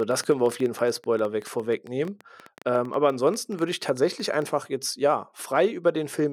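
Irregular ticking runs through the speech from the start to 4.43 s, just before "jetzt ja": a train of clicks near 10 per second, poking above the voice, likely interference.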